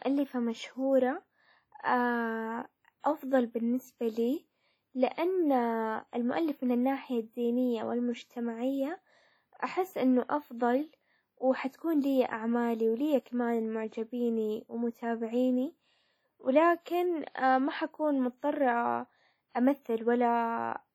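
From start to end the speech rings and smears, with a hiss breathing under it. Likely WMA compression, fitting a low bitrate near 32 kbps.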